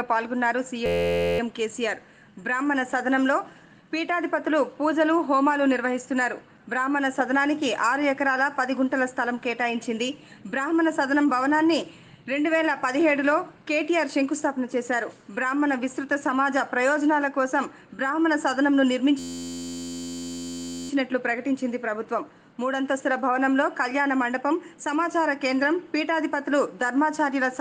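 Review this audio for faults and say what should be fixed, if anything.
System hang loop at 0.86 to 1.39 s and again at 19.19 to 20.90 s: the computer or driver stalled while the sound hardware kept replaying one 11.6 ms chunk, which fits a 512-sample buffer. The result is a steady 86.1 Hz buzz with little or no audio lost. To prevent it, fix the driver or system stall and use a larger buffer or higher audio-thread priority so the ring buffer keeps being refilled.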